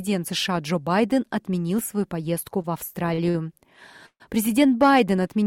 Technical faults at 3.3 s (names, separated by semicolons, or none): short stall from a late packet